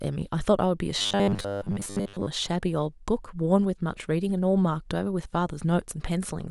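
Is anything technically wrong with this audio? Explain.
Yes. From 0.99 to 2.27 s the speech turns into a rigid, metallic buzz pitched at 100 Hz. The syllables still roughly follow their shape. This is robotic sound from repeated short buffers. New audio likely arrived too slowly, so playback kept looping the most recent slice while most of the real audio in that stretch was skipped. A 100 Hz buzz fits a loop about 10 ms long.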